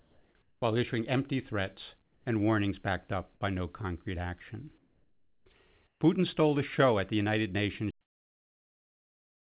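Comfort noise in place of the background, 0.0 to 0.62 s: the room tone before "issuing empty threats and" is a smooth, featureless hiss, about 1 dB quieter than the real background. This is likely because the sender stopped transmitting during silence and the receiver synthesised noise to fill the gap.

Onset clipped by the voice detector, 0.60 to 0.62 s: the first 20 ms of "issuing empty threats and" is missing, so the phrase starts abruptly. The detector was likely slow to register returning sound, and comfort noise covered the lost beginning.

The same comfort noise returns at 2.02 to 2.26 s (about 3 dB down), 4.78 to 5.46 s after "by no concrete action" (about 2 dB down), and 5.87 to 6.01 s (about 8 dB down). Each time, the textured background flattens into a uniform hiss.

Cut-off end at 7.91 s: the final buffers were never played, so the audio stops mid-sound and falls straight to digital silence with no natural decay. 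Throughout, nothing is heard above 4 kHz, which points to a narrowband telephone-grade codec on the call path.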